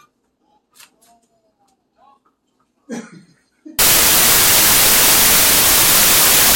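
A recording of sounds that plays cleanly until 3.79 s, when it turns into loud, harsh broadband noise through to the end. That's samples built from the wrong bytes: the reader misassembles each sample, so the jittery low-order bits end up as the big part of every value.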